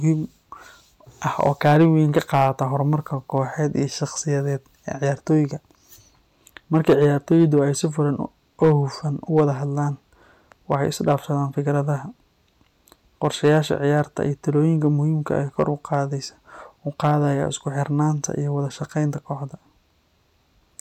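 Throughout the speech, a gain stage drives the signal about 7 dB past what it can pass, so a small fraction of samples, well under one percent, hit the ceiling and are cut flat. This hard clipping adds high harmonics, heard as brief crackle on the loudest peaks.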